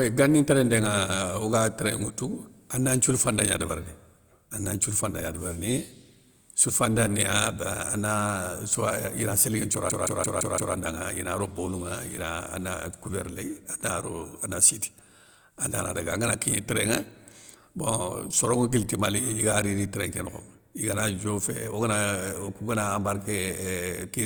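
At 9.90 s the speech locks into a system hang loop that lasts until 10.75 s. The computer or driver stalled while the sound hardware kept replaying its ring buffer, so one 170.67 ms slice repeats exactly five times, a machine-gun stutter at about 5.86 Hz. The length fits an 8192-sample buffer, and essentially no audio goes missing. A waveform shows identical repeating blocks, and a spectrogram shows the same pattern stamped out in vertical stripes.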